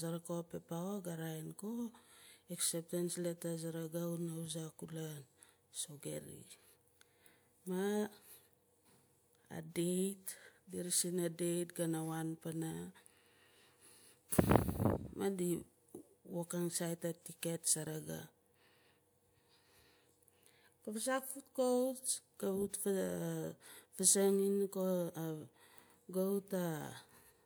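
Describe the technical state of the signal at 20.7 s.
At 20.7 s the signal is intact, with no audible dropout, distortion, noise or other technical fault at that point in the speech.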